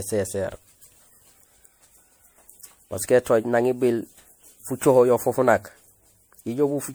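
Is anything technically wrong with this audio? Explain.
Yes. Throughout the speech there's generation loss: it sounds swirly, smeared and hollow, with blurred consonant attacks. That fits an MP3 chain around 96 kbit/s, likely re-encoded about five times, each pass stacking fresh quantisation noise and spectral holes.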